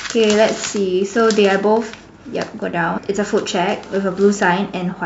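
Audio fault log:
2.97 s, compressed frames skipped: the speech jumps forward by roughly 300 ms, around ten frames' worth at about 26.1 ms each, as the decoder drops whole frames.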